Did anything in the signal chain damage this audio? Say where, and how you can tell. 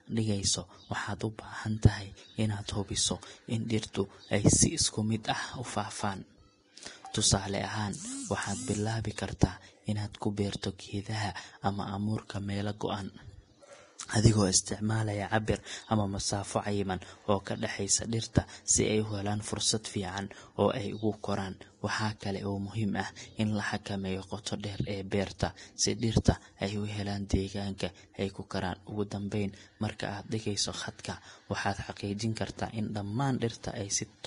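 Yes, at the codec stage. The whole clip is hissy and grainy, with the treble turned to rough noise and nothing at all above 10.6 kHz. That hard ceiling plus the coarse, smeared top end is the signature of heavy Vorbis compression, most likely at a low setting, which fits a bitrate of around 31 kbps. At that quality the encoder drops the cut-off and quantises the residue so crudely that fine detail just becomes noise.

There's also pre-echo, the same codec showing its block structure. Between 24.43 and 24.46 s, right after "ah in la xakameeyo" and before "dheer ee", a short hiss of about 31 ms leads into the attack. Again at 25.39 s, between "dheer ee" and "si dhirta", there's a briefer smear of about 17 ms. The attack lands late in a transform block, and the quantisation noise meant for the loud part spills into the quiet moment before it.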